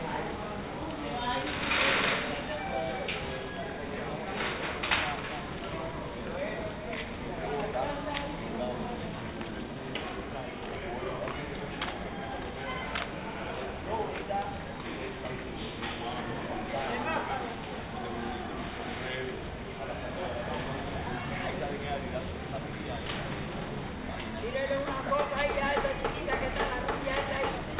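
No technical faults are audible.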